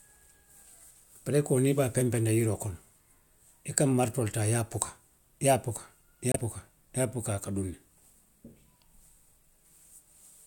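At 6.32 to 6.36 s the speech cuts to silence for 25 ms, then resumes. This is a Bluetooth stall: interference likely held up the wireless packets, so the headphone buffer ran empty and playback paused briefly until the retransmitted data arrived.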